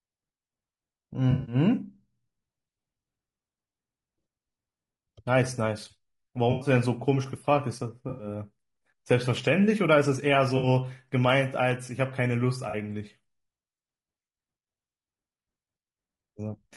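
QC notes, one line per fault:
Throughout, low-delay AAC compression: the speech sounds rough and grainy, with noise filling the gaps between harmonics and a thin, synthetic-sounding top band. The likely cause is AAC-ELD coding at a bitrate that fits about 32 kbps. At such a low bitrate it has too few bits to code the spectrum finely, and it spends its limited bits on coarse noise and a reconstructed upper band.
1.31–1.55 s, 6.51–6.69 s, 8.09–8.27 s, 10.57–10.67 s, 12.69–12.75 s, AAC frame loss with concealment: brief smeared, noisy, phasey patches where the decoder rebuilt missing audio from the last good spectrum. The first patch covers about 140 ms of loss spread over 160 ms, with the longest unbroken gap of roughly 70 ms. The later patches last 100, 100, 60 and 40 ms, which fits 20 ms frames.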